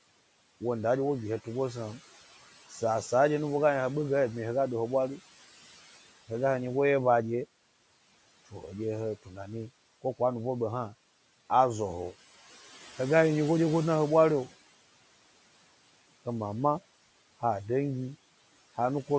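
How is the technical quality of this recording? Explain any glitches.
There's one glitch worth flagging, a short bit of speech cut by the noise suppressor, heard over room noise sitting about 20 dB under the speech and a call-style top end that stops around 8 kHz.

From 9.23 to 9.38 s the suppressor mistook part of the speech for background and turned it down along with the noise, by about 15 dB at its deepest. For roughly a tenth of a second the sound goes faint and swallowed.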